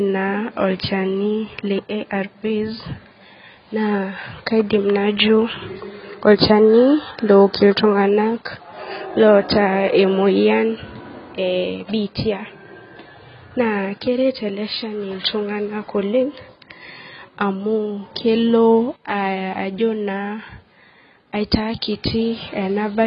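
From start to finish the speech is band-limited and smeared, likely from AAC compression, with heavy damage that fits a 16 kbps AAC-LC stream. Nothing sounds above 5.4 kHz, so sibilants lose their edge, and coarse spectral quantisation leaves the sound dull and warbling.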